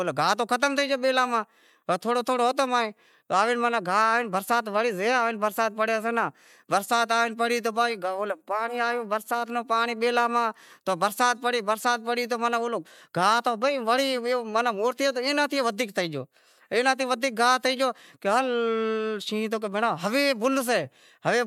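No technical fault can be heard anywhere in the recording, so there is nothing to place on the timeline.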